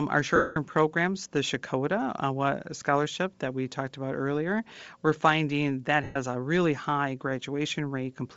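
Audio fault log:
throughout: Bluetooth LC3 compression. The speech has a plainly audible breathy, grainy edge, with the upper range sounding washed into noise rather than real detail. That's likely LC3 at a low bitrate, consistent with around 32 kbps and short 7.5 ms frames.
0.36–0.56 s and 6.03–6.17 s: lost LE Audio frames. For about 0.2 s and then about 0.14 s the speech turns into a noisy smear. The decoder keeps replaying the last spectrum with scrambled signs, so there's no fresh detail, just a fuzzy, fading hold.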